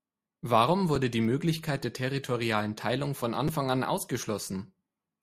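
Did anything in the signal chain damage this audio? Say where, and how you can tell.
Yes, a repeated buffer at the driver or buffer stage, at 0.96 s and 3.48 s. Fresh samples arrived late, so the device replayed its last 5.33 ms block, once at the first point and twice at the second. That block length fits a 256-sample buffer, so each event is a brief click or buzz. On the waveform an identical short segment repeats with hard joins, and a spectrogram shows a thin vertical stripe at each join.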